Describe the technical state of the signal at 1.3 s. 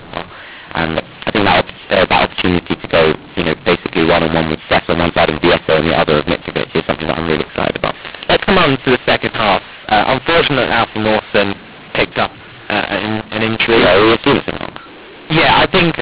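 A mu-law and A-law mix-up covers 1.3 s and the whole clip. A-law samples are decoded as mu-law. Levels scramble, the speech turns harsh, and pauses fill with noise.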